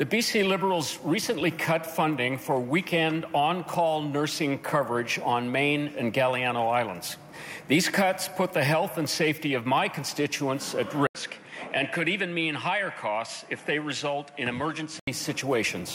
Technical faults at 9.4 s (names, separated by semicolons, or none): none